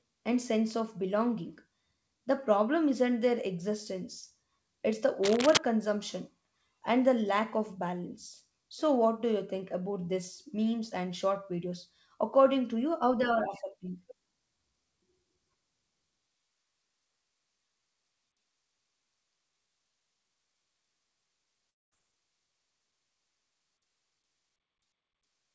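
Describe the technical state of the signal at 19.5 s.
At 19.5 s the speech is intact, with no fault, just the normal sound of a wideband call path whose G.722 coding leaves nothing above 8 kHz.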